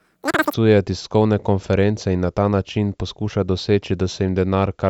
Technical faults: wrong sample rate

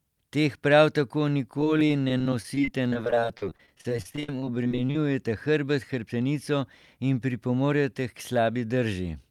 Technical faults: repeated packet loss (robotic sound)

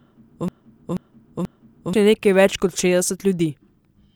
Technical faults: broken-record loop

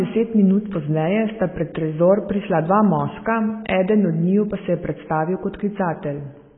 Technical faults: AAC compression

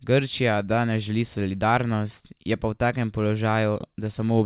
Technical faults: none

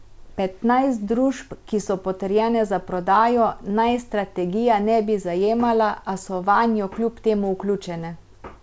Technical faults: none

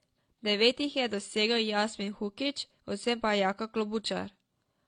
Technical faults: transcoding between lossy codecs

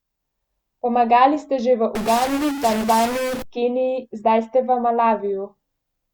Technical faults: stuck bit

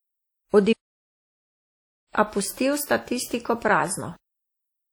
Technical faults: WMA compression; playback stall

